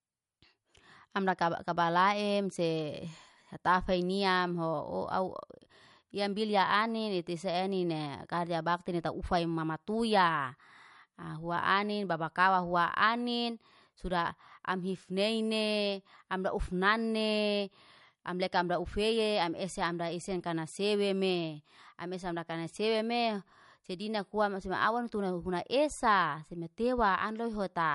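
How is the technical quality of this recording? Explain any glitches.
The recording carries plainly audible codec damage from start to finish. MP3 compression runs throughout the speech: nothing survives above 11.2 kHz, and the sound has a watery, swirling texture, which points to a low bitrate of around 50 kbps. Short of bits, the encoder likely cut the treble at a fixed point and dropped quieter frequency lines, letting them flicker on and off between frames. That flicker produces the swirl and metallic chirps on s sounds, while sharp onsets smear.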